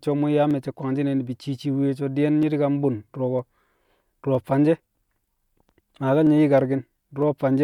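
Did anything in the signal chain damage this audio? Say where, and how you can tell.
Yes: likely clock drift buffer slips between devices. About 400 ppm of clock mismatch drops or repeats a small block of samples, causing regular clicks every 0.96 s from 0.51 to 7.22 s.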